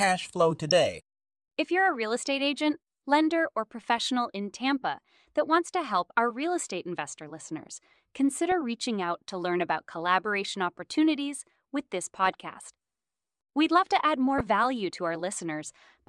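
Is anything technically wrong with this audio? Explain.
Yes. Weak DAB reception is letting bit errors slip past the error correction into the MP2 audio stream, producing DAB burbling at 0.69–0.71 s, 3.96–3.98 s, 8.52 s, 12.24–12.34 s and 14.38–14.41 s. At an error rate of roughly 0.07 to 0.2 percent, corrupted samples put short blips of noise in single sub-bands, and corrupted scale factors make individual sub-bands leap in level for up to a frame. Over the speech this is heard as brief burbling.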